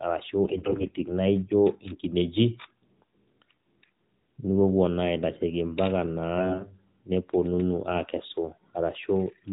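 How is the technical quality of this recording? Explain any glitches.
The recording has two short glitches, both AMR bit errors. They occur from 0.46 to 0.93 s and from 6.38 to 6.75 s. The speech keeps roughly its pitch and level but turns hoarse, scratchy and gargly. A weak link flipped many of the less protected bits in each frame, the second burst more heavily than the first. The checksum still passed, so the decoder used them. Its pulses landed wrongly, and fine pitch, gain and spectrum values drifted. The narrowband mobile coding around these bursts keeps everything below 4 kHz.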